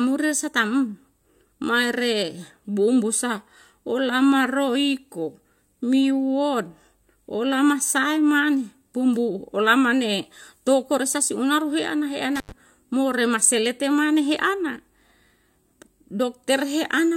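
A speech recording with an intermittent contact fault between 12.36 and 12.52 s, where a loose cable or plug opens for about 90 ms. Crackle marks each edge and faint hiss fills the gap, unlike a digital dropout's clean, silent cut.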